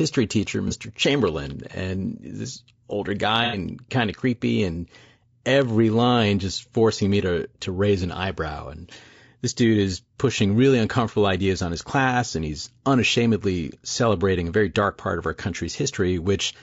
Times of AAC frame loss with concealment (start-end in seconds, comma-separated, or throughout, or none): 0.68-0.73, 3.44-3.58